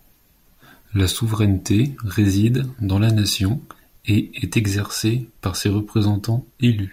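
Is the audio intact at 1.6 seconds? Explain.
Yes, the audio is intact at 1.6 seconds, with no dropout, click, distortion or other fault audible at that point.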